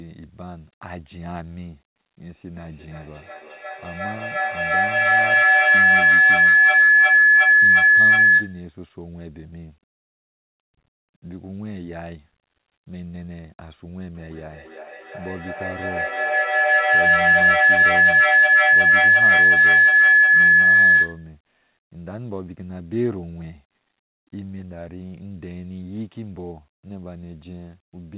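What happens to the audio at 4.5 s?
At 4.5 s the clip is inside a feedback howl running from 2.41 to 8.74 s: a mic-to-speaker loop gaining level each pass, ringing near 1.5 kHz, with the loop repeating roughly every 0.3 s, about 19 dB above the speech.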